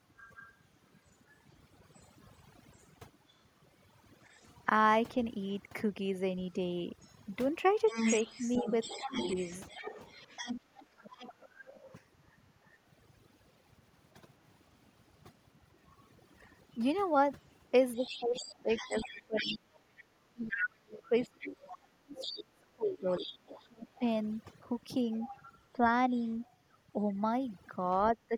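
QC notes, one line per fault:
Throughout: overdone noise removal. Background drops and breaks up into twinkling specks, and quiet parts of the voice vanish along with the noise bands.
0.17–12.01 s: other side's voice leaking through, about 10 dB under the talker. Likely an echo canceller missing loudspeaker sound picked up by the microphone.
8.03–9.14 s: speech suppressed in double talk. The talker's voice dips in pieces, around a fifth of a second in all, by up to roughly 15 dB. Likely the canceller turning both voices down.
17.96–26.55 s: other side's voice leaking through again, quieter, about 15 dB below the talker. Likely the same incomplete echo removal.
17.96–28.35 s: speech suppressed in double talk, much heavier. Roughly four seconds of the voice drop away or cut out, as deep as about 30 dB. Likely caused by overlapping talk.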